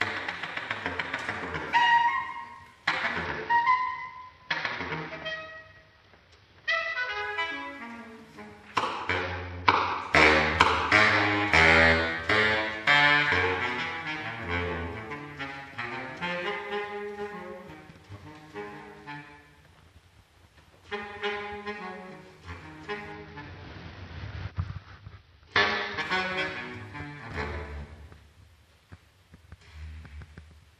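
From 3.25 to 7.22 s, 9.21 to 10.01 s and 23.12 to 26.0 s the audio shows a Bluetooth SBC bit pool drop. The link fell back to far fewer bits per frame, which points to a bit pool cut from about 31 to 8, near 66 kbps. The top sub-bands lose their bits, so the treble dulls, and the coarse quantising adds grit. On a spectrogram the high band goes dark, with noisy speckle below, until the rate recovers.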